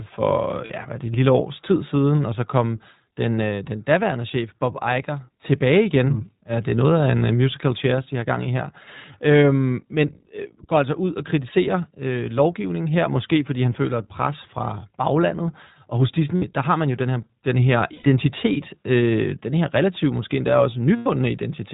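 Throughout, the speech passes through the iLBC codec at 20 ms frames. Each frame's excitation is coded on its own within a narrowband channel, so nothing above 4 kHz survives, and the speech sounds plainly rough and slightly synthetic.

Lost iLBC frames recur. At 0.66 s, a 40 ms gap sits just before "ja hvad er det". At 12.62 s, 20 ms drops between "ud og kritiserer øh" and "her måske fordi han". At 16.36 s, 60 ms goes before "der har man jo", then 100 ms each at 17.94 s and 20.96 s. The decoder fills each gap by repeating the last pitch cycle mixed with noise, heard as a brief held, buzzy vowel, with the voice right again almost at once.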